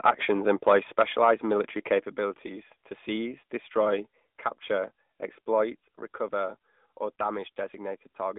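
From start to finish the speech carries the sound of the AMR narrowband mobile codec. The band sits roughly between 200 Hz and 3.6 kHz, with nothing at all above 3.8 kHz, so it has that boxed-in phone quality. The coder models the voice as a vocal-tract filter fed by sparse pulses, and here that damage is plainly audible: a buzzy, synthetic edge that fits a higher AMR-NB mode of about 10.2 kbps.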